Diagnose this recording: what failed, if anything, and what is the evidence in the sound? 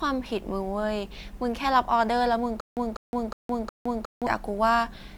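The speech sounds swirly and hollow throughout, with smeared consonant attacks and a watery haze, even though the bandwidth still reaches about 20.1 kHz. That is more damage than a single decent encode would leave. The stage is the codec. The pattern points to generation loss, likely from around seven successive MP3 passes at something like 128 kbit/s. Each re-encode quantised afresh on a shifted frame grid, so the noise and spectral holes accumulated.

From 2.60 to 4.27 s, a burst of about 0.20 s of speech repeats four times at a steady 0.36 s period, with about 0.16 s of dead digital silence after each repeat. The audio that belonged in that span never appears. This is a stutter with silent gaps at the playback or buffer stage. The player likely stalled and, on each retry, replayed its last fragment before running empty.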